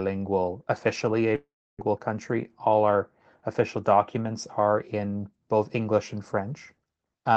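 From 1.35 s to 1.84 s the speech cuts out. The last sound is drawn out into a fading buzz, then about 300 ms of near-silence follows, and the speech resumes with 440 ms missing. The likely cause is a long network dropout, with the receiver concealing the gap.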